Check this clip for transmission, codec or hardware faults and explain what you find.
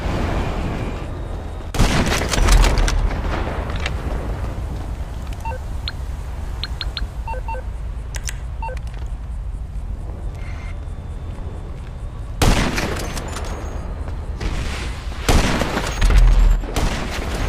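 Two sudden gain jumps are present. At 1.71 s the level drops by about 9 dB for 85 ms, and from 16.56 s to the end it falls by about 6 dB. The likely cause is a gain setting applied between adjacent samples with no ramp. Sound and background noise step down together, instantly, which distinguishes this from the gradual pumping of automatic gain control.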